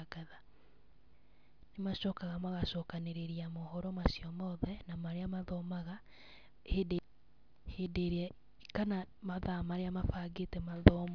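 No technical faults can be heard anywhere in the speech recording.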